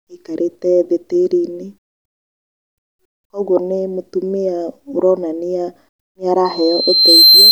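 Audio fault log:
6.45–7.52 s loudspeaker feedback squeal: after "nĩ mũtumia aronania nĩ", a 4.1 kHz tone swells over about 0.7 s to about 10 dB above the speech, as the microphone re-amplifies its own loudspeaker.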